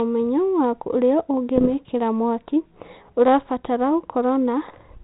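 Speech on a G.726 ADPCM link, its light coding sounding consistent with 32 kbit/s, suffers bit errors on the ADPCM link at 1.56–1.71 s, just after "ũmenyo wa ũrĩa", and at 4.62–4.95 s. At under one percent, each flipped bit knocks the decoder's step size and prediction off track, so the damage rings on briefly as pops and rough bursts with sudden level jumps.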